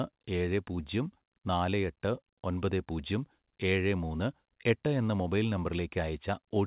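Speech with no technical faults to point to. It comes through a working call path, and the sound stops at 4 kHz, which fits narrowband telephone coding such as G.711 mu-law.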